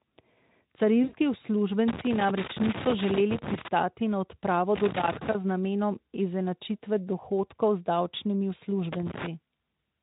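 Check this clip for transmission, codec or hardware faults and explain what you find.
Two kinds of fault are present: a codec-concealed packet loss near the start and recurring connector crackle.

From 1.03 to 1.17 s, VoIP packet loss concealed by the speech codec: about 100 ms of audio, which fits five 20 ms frames, is extrapolated, giving a buzzy or noisy, fading smear.

Loose connector crackle at 1.88–3.68 s, 4.76–5.35 s and 8.93–9.27 s: an intermittent contact chops the signal, producing irregular bursts of scratchy crackle.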